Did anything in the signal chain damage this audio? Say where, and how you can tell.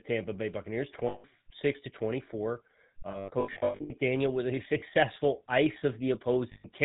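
Yes. The GSM full-rate codec damages the whole speech clip. It sounds buzzy and gravelly with nothing above 4 kHz, because a pulse-driven vocal-tract model replaces the waveform.

Lost GSM frames show up in the network stage as rough, metallic held rings at 1.08–1.25 s, 3.1–3.91 s, 4.8 s and 6.52–6.66 s. The decoder repeats the last good frame at falling level.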